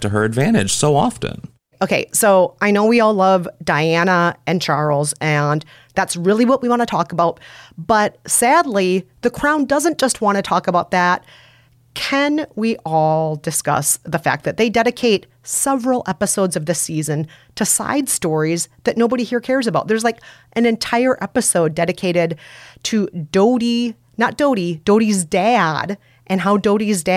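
No audible faults anywhere in the recording; nothing to flag.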